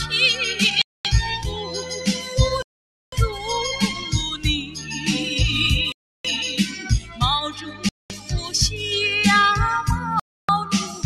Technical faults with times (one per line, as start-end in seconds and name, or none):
0.00-11.05 noise suppressor applied to music or sounds
0.82-1.05 Bluetooth stall
1.45-1.91 sound cut by the noise suppressor
2.62-3.13 Bluetooth stall
4.63-5.08 sound cut by the noise suppressor
5.92-6.25 Bluetooth stall
6.70-7.22 sound cut by the noise suppressor
7.52-8.50 sound cut by the noise suppressor
7.89-8.10 Bluetooth stall
10.20-10.49 Bluetooth stall
10.90-11.05 sound cut by the noise suppressor